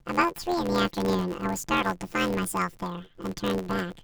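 Speech runs through a robotic buzz from start to finish, the signature of planar audio read as interleaved. Each block of left samples followed by right samples is being consumed as alternating pairs, so every short stretch plays twice at double speed. The blocks here last about 11.6 ms, which fits a 512-sample block, so the buzz sits near 86 Hz and no octave jump is heard. A plain pitch shift would move the voice up without that steady block-rate growl.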